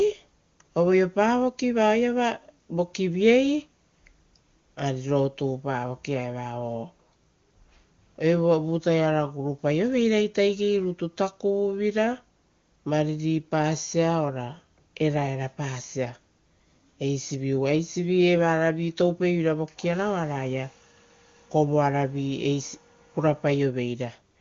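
No technical faults are audible.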